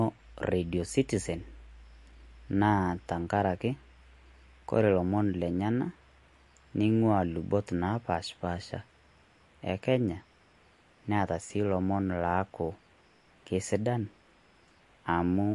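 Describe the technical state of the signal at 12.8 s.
At 12.8 s the speech is still carrying the MP3 compression that runs through the whole recording, most likely from an encoder starved of bits, at a rate the damage suggests is near 48 kbps. The encoder has cut everything above 11.3 kHz, dulling the top end, and weak frequency lines drop in and out from frame to frame, giving a plainly audible watery, swirling texture.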